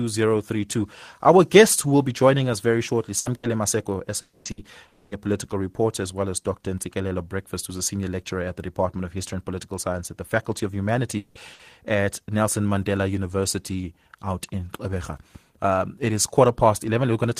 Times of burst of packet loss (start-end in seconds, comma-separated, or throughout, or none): 3.19-3.46, 4.51-4.60, 11.53-11.62